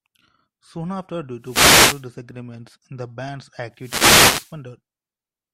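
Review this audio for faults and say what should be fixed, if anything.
Two wireless microphone noise hits cut into the speech. They run from 1.40 to 2.09 s, after "after due", and from 3.73 to 4.59 s, after "the band's". Reflected radio paths cancel, the FM signal fades, and receiver noise rises as static. Use diversity receivers with clear antenna sight lines.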